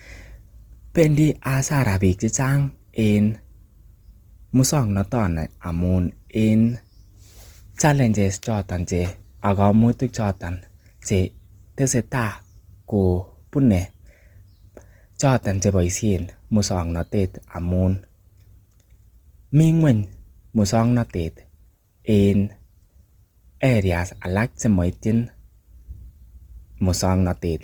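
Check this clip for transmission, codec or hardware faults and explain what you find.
One codec fault runs the whole length of the speech: Opus compression. Across all of it, the damage is plainly audible as a rough, grainy, noisy texture on the voice, while the band still reaches up to about 20.1 kHz. Likely cause: the music-mode (CELT) encoder, at a rate that fits roughly 24 kbps, keeps each band's energy but fills starved bands by folding lower content or inserting noise. That is why it grains rather than swirls: it leaves fewer spectral holes and less warbling than MP3, and there is no muffled, narrowed speech-mode sound.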